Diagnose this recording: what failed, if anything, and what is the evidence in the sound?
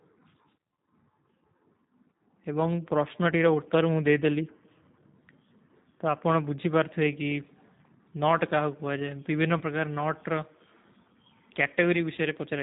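Throughout, the speech sounds band-limited and slightly rough and synthetic, with nothing above 4 kHz. This is a G.729 codec stage (G.729A), consistent with an 8 kbit/s VoIP link. Each 10 ms frame is rebuilt from a vocal-tract filter, a pitch predictor and a few pulses, which leaves plainly audible codec damage.

In the network stage, VoIP packet loss was concealed by the speech codec at 9.58 to 9.63 s and 12.15 to 12.20 s. Each gap sounds like a brief stretched tone or coloured noise that fades, consistent with one lost packet of about 30 ms. The decoder extrapolated from its last pitch and filter while lowering the gain, and the following frames recover weakly.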